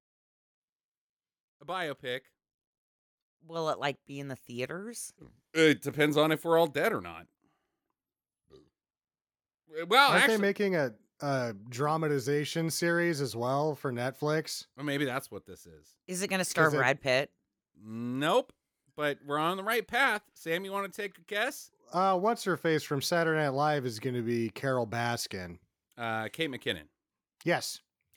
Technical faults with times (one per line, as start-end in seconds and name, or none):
1.66-5.84 automatic gain rising